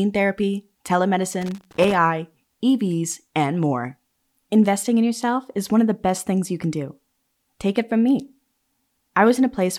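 From 1.41 to 1.94 s the speech is broken up by loose connector crackle, an irregular burst of scratching lasting about half a second. A worn or dirty contact in the signal path is making and breaking as it shifts, so the audio keeps cutting in and out in rapid, uneven fragments. On a waveform this shows as jagged dropouts and spikes. A spectrogram shows scattered broadband vertical streaks across the frequency range for the same span.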